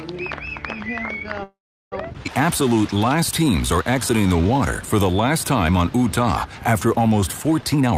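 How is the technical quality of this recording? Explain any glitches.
The recording has four timing glitches, all typical of packet-based call audio.

From 1.43 to 1.94 s there is a call audio freeze: sound stalls, a fading continuation gives way to roughly 380 ms of silence, and audio resumes where it stopped, likely from delayed packets draining the jitter buffer.

At 2.24 s a skip ahead occurs: about a fifth of a second of audio is dropped and playback jumps forward, the two sides joined almost directly.

From 2.45 to 4.59 s the jitter buffer slow-down repeats pitch periods, adding 199 ms, so the audio plays at 91% speed with unchanged pitch and drawn-out sounds.

From 7.64 to 7.93 s a jitter buffer speed-up trims short pitch periods, roughly 150 ms in total, pushing playback to 147% speed and making it sound hurried.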